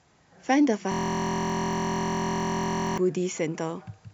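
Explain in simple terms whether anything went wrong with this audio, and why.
From 0.92 to 2.98 s the speech becomes a steady low buzz. This is a system hang loop: the computer froze and kept replaying one 23 ms scrap.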